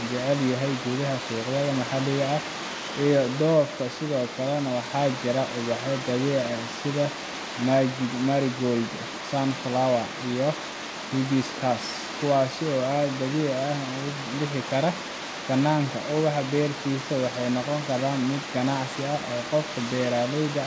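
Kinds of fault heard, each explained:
No faults are audible in the speech; it comes through a call path with the expected coding noise and no content above 8 kHz, which fits a wideband codec such as G.722.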